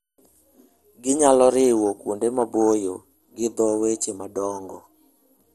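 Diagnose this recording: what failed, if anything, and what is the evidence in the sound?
The codec stage is at fault throughout the speech: it sounds dull, with nothing above 12.1 kHz, and carries a plainly audible gurgling, granular distortion. This is likely MP2 compression at a low bitrate, around 64 kbps. Starved of bits, Layer II switches off whole upper sub-bands and quantises the remaining ones coarsely. That grainy texture separates it from a clean low-pass filter, which would dull the sound without adding any distortion.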